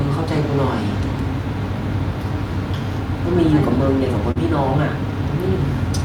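At about 4.31 to 4.38 s there's a short concealed packet loss: roughly 40 ms of the call arrived too late for the decoder, so the receiver bridged the gap by extending the preceding sound, then faded back into the real signal. You hear it as a quick smear.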